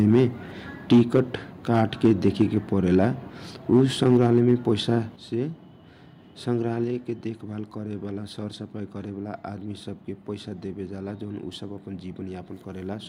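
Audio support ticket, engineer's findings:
Microphone overload: harsh crackle on loudest peaks at 0.0–0.24, 0.91–1.2, 1.75–2.43, 2.96–3.05 and 3.72–4.54 s, about 2–5 dB over full scale. Likely mic input gain too high, converter flattening peak tops. Distortion only, no level drop.

Microphone volume stepped down: abrupt level drop of speech and background together at 0.93, 4.17 and 5.16 s, about 2, 3 and 6 dB. Likely call software cutting device input gain after clipping. Clean step with no added crackle, follows overload peaks.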